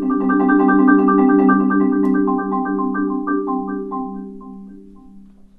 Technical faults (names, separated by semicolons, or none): none